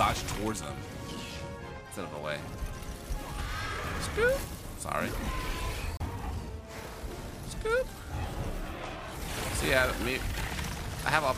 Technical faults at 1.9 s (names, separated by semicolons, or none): none